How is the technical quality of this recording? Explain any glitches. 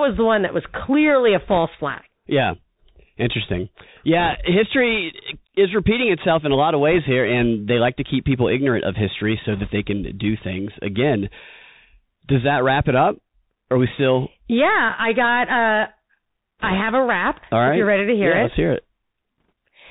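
The quality is poor: the speech has narrowband headset coding throughout, plus six short bursts of crackle.

Bluetooth CVSD headset codec, throughout: one-bit up/down coding, fitting a 64 kbps link, cuts everything above 4 kHz, leaving scratchy s sounds and a granular hiss.

Bit errors on a Bluetooth voice link, at 1.49–1.58, 4.19–4.35, 6.93–6.99, 9.53–9.69, 16.58–16.77 and 19.38–19.52 s: a few percent of flipped bits add brief rushing crackle, never loud clicks.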